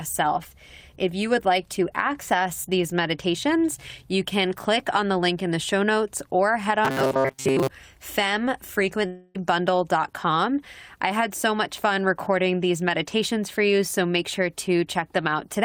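Robotic sound from repeated short buffers runs from 6.85 to 7.69 s. Audio likely arrived too slowly, so playback looped a tiny chunk of roughly 7.5 ms, skipping most of the real speech. Those repeats impose a rigid, metallic 134 Hz buzz that loosely tracks the speech.

A long network dropout follows at 9.06 to 9.36 s, likely from packets that never arrived. About 280 ms of the speech is lost, and the receiver bridges the whole 282 ms gap by extending the last sound so that it fades, with no silence, before the speech resumes beyond the missing part.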